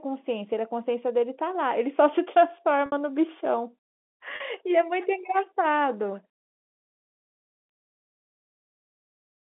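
At 2.86 s and again at 4.36 s the speech shows packet loss with pitch repetition: about 60 ms, then 40 ms, went missing, which fits three and then two 20 ms packets. The receiver filled each gap by looping the last pitch period, so the sound briefly holds on a slightly buzzy, frozen tone before the speech carries on. On a spectrogram each gap shows flat, unchanging harmonic lines. On a waveform it shows identical repeating cycles that taper off. The narrow telephone band of the G.711 line can be heard around them.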